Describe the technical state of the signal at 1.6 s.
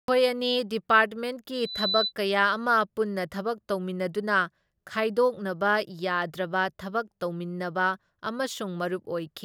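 At 1.6 s the microphone is picking up the loudspeaker it feeds, and at 4 kHz the loop gain exceeds one, causing loudspeaker feedback squeal from 1.54 to 2.13 s. A steady 4 kHz tone swells over roughly a third of a second to stand somewhat above the speech.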